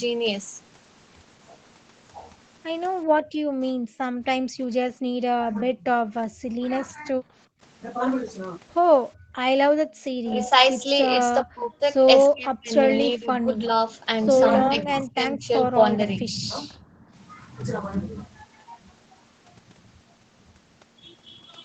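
Background gated by the echo canceller first appears from 3.04 to 5.13 s. While the far end plays, the canceller clamps the microphone, and the room tone falls away by as much as about 28 dB before returning. On the waveform and spectrogram, the noise floor collapses toward silence across all bands, then snaps back.

From 5.41 to 7.15 s the speech dips. The likely cause is speech suppressed in double talk: the canceller cannot separate the talker from the loudspeaker echo, so it turns both down, by roughly 20 dB at worst. The spectrogram shows the speech energy dropping.

Gating recurs at 7.47 to 7.61 s (about 25 dB) and at 9.15 to 9.94 s (about 36 dB, the deepest drop). A short suppression follows at 10.22 to 10.27 s. Longer stretches come at 11.43 to 13.72 s, around 25 dB deep, and at 14.68 to 16.7 s, milder at about 15 dB. A final shallow gate of about 9 dB runs from 16.73 to 17.08 s.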